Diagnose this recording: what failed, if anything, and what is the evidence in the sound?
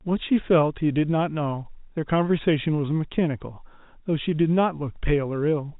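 Nothing failed: the speech comes through a G.711 mu-law telephone path at 64 kbps with at most faint coding damage, and no stage from the analogue wiring through to playback leaves any audible evidence of trouble.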